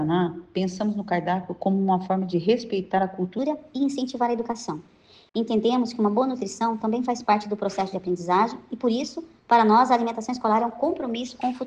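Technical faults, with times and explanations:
3.39 to 11.66 s: section at the wrong speed. This stretch was likely played against the wrong clock and runs 1.18 times too fast through to the end. Pitch and pace shift together, so the audio suddenly sounds about three semitones higher and hurried.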